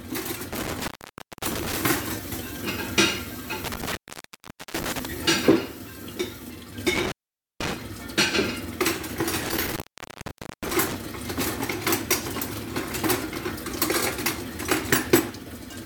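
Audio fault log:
0.53–1.77 s, 3.64–5.06 s, 6.95–7.77 s, 9.43–10.96 s: intermittent contact. A loose connector in the signal path breaks and remakes its connection four times. Each time the sound drops out for roughly 0.55 s, 0.79 s, 0.48 s and 0.87 s respectively. Crackle marks the edges of each gap as the contact scrapes open and shut, and faint hiss remains while the line is broken, before the sound returns abruptly.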